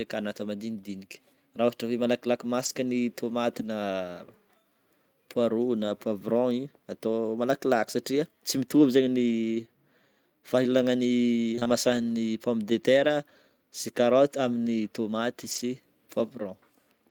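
At 2.65–2.67 s, between "hoe malakilaky" and "ny tômaty", again just after "ny tômaty" at 3.61–3.67 s, and at 5.87–5.89 s, a lost packet was rebuilt from error correction. Each loss was replaced with the low-bitrate redundant copy carried in the following packet, so there is no dropout, but those brief spans sound grainier and noisier.

Between 11.55 and 15.61 s there are scattered short gaps, roughly three of them, the longest around 20 ms. Each missing piece was concealed by extending the preceding sound. The result is brief ticks or small smears in otherwise continuous audio.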